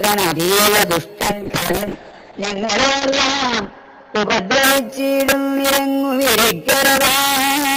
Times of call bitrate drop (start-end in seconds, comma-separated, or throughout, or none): 1.24-5.41